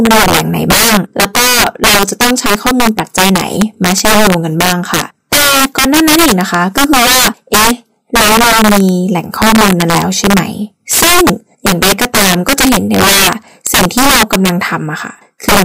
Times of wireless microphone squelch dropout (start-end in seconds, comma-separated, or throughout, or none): none